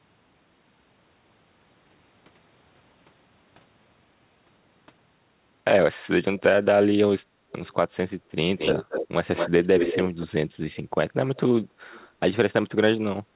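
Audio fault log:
7.51–7.71 s, 8.58–9.08 s, 9.35–10.27 s: echo leak. A delayed copy of the talker returns, very faint at 293 ms first, then about 5 dB under the speech at 225 ms. This is likely a loudspeaker echo slipping past cancellation. Unlike reverb, it is a distinct, repeated copy rather than a smooth tail.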